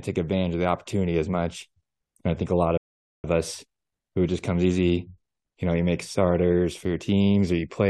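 At 2.78 s the player exhausted its downloaded audio and halted, a rebuffering stall. After "I think a lot" the speech drops to silence until 3.24 s, then picks up exactly where it stopped with "of us who just", losing nothing but adding about 0.46 s.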